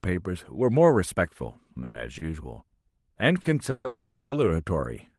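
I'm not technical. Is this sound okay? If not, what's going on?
No. There are three call audio freezes, at 1.84, 3.71 and 3.87 seconds. The speech stops and a fading buzz fills in. The freeze at 3.87 lasts almost half a second. Delayed network packets are the likely cause. Short stalls from a late packet come at 2.18 and 3.42 seconds. A sound is held slightly too long each time.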